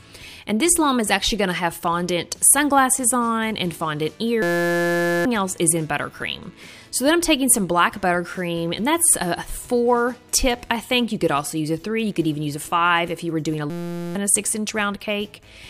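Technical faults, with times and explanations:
4.42–5.25 s and 13.70–14.15 s, system hang loop: a 5.8 ms slice, which fits a 256-sample buffer, repeats exactly, producing a steady 172 Hz buzz rather than a stutter, and replaces roughly 0.7 s and 0.5 s of audio.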